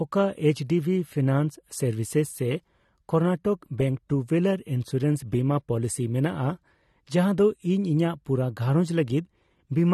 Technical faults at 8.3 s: AAC compression; pre-echo

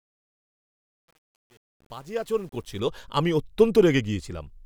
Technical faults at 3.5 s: none

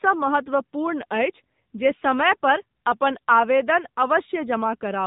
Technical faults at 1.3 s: AMR narrowband mobile codec

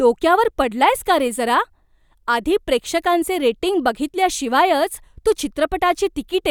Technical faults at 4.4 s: none

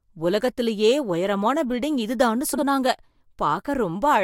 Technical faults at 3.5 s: none

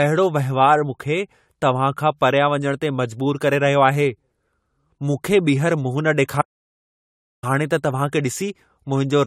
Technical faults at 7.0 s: generation loss; audio dropout to silence

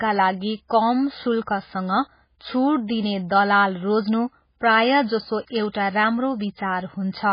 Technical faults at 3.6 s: MP3 compression

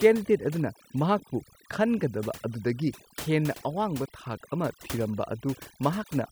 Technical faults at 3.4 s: overdone noise removal

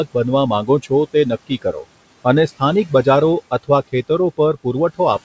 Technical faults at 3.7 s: none

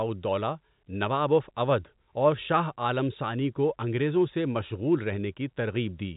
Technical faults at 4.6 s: none

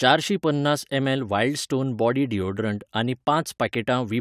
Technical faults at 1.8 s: none

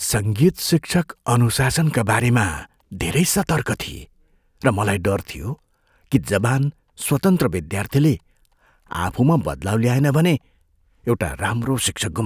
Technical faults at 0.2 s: none

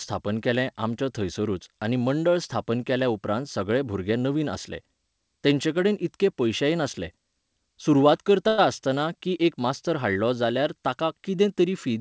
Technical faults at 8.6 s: call audio freeze

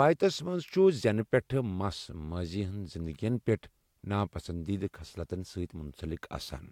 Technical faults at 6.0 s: none

